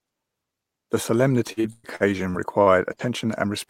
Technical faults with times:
1.47-3.02 repeated packet loss (robotic sound)

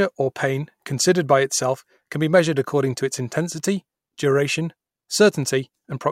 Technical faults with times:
0.94 dropped samples

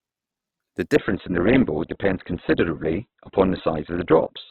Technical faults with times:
0.95-4.50 adaptive stream at a lower bitrate

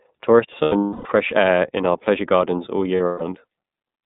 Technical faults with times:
0.00-4.05 iLBC codec
0.62-1.08 lost iLBC frames
2.97-3.22 lost iLBC frames

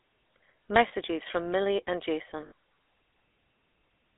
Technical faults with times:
0.00-4.18 GSM full-rate codec
0.88-0.93 lost GSM frames
2.46-2.52 lost GSM frames

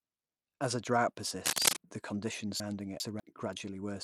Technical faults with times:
0.00-4.03 Bluetooth SBC compression
1.43-1.77 cable scratch noise
2.60-3.20 chunks out of order

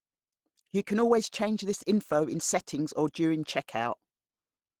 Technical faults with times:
0.00-4.80 Opus compression

